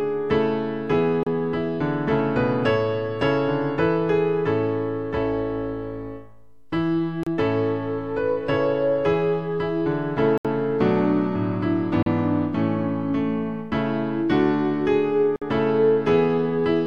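At 1.23, 7.23, 10.38, 12.03 and 15.36 s the sound drops out for 33 to 71 ms, then resumes. This is a Bluetooth stall, likely caused by held packets draining the buffer, and it shows as clean flat gaps in the waveform and spectrogram.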